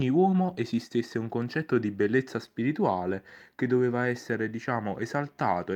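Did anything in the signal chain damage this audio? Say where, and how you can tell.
Yes. The damage comes from clock drift between sender and receiver, at the network and jitter-buffer stage. Through the whole clip the sender's clock runs roughly 1.5% slow relative to the receiver, so the jitter buffer keeps draining faster than it refills. You can tell from the timing: small hitches turn up at uneven spacing rather than at any fixed rate.

The receiver answers with repeated timing corrections between 0.46 and 5.35 s. Because the buffer is running short, every edit goes the same way, stretching the audio by repeating short pieces, so this stretch plays at about 98% speed and gains roughly a tenth of a second overall. Each repeat is tiny.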